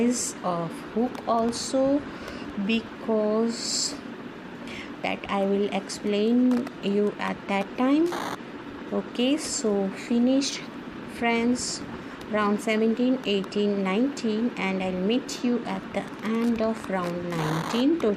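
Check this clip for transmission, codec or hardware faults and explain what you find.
No transmission, codec or hardware faults turned up anywhere in this clip.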